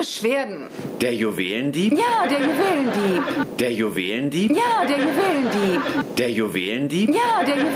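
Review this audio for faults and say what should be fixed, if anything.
Gain pumping runs through the whole clip: the gain ducks by around 20 dB under each loud sound, squashing loud and soft parts together. The likely cause is input gain set far too high, with a fast limiter clamping down on every peak. On a waveform the envelope looks flattened, with the noise floor rising visibly between events; a spectrogram shows the background band brightening and darkening in step with them. To prevent it, lower the input gain so peaks sit well below the limiter's threshold.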